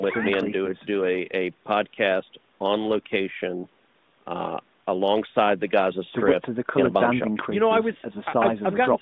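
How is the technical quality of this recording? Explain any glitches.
The technical quality holds up, with no glitches to explain.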